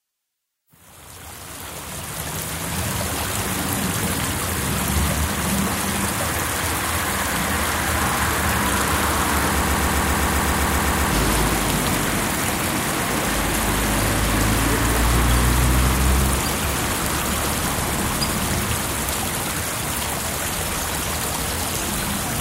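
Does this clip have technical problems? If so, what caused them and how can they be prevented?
Yes. A broken-record loop runs from 9.62 to 11.13 s: a 130 ms fragment repeats exactly, back to back, 12 times, and the sound that belonged there is lost. The likely cause is a stalled player, encoder or stream that kept resending its last buffered piece. Prevent it with enough buffering and stall detection that outputs silence instead of repeating stale data.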